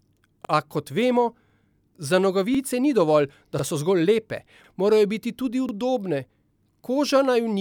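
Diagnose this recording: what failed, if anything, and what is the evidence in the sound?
Overlapping chunks at 0.45, 1.50, 2.55, 3.59, 4.64, 5.69 and 6.74 s: each join replays about 48 ms of speech, heard as a regular stutter roughly every 1.05 s. The failure is in buffer-stage processing: each 1-second chunk begins before the previous one finished, duplicating the overlap.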